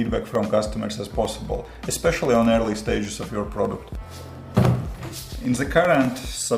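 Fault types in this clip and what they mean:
Periodic USB or driver dropouts: something stalls the USB bus or audio driver every 0.1 s, replacing roughly a millisecond of audio with silence each time. From 0.05 s to 6.45 s this leaves a steady train of small ticks, ten per second, wherever sound is present.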